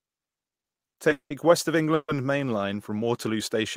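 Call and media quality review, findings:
Call audio freeze, 1.12–1.32 s: last sound stretched into a fading buzz, then about 100 ms of silence; resumes where it stopped, nothing lost. Likely jitter buffer underrun from late packets; playout delay grows 180 ms.

Call audio freeze, 1.94–2.10 s: same fading buzz into roughly 50 ms of silence, continuing intact afterwards. Same likely mechanism: the receiver filled 140 ms while waiting, shifting playback 140 ms later.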